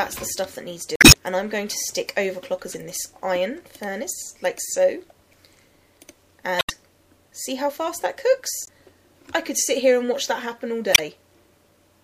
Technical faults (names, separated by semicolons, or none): damaged data in a compressed stream